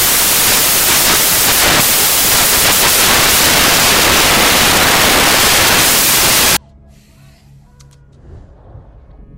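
From the start to 6.57 s the audio suffers from samples built from the wrong bytes: the reader assembles each sample with its bytes misaligned or in the wrong order, so the rapidly fluctuating low-order bits end up as the most significant part of every value. The result is loud, harsh broadband noise, close to white on the louder sounds. On a waveform this appears as a dense, noise-filled block, and a spectrogram shows flat, broadband energy filling every frequency until 6.57 s.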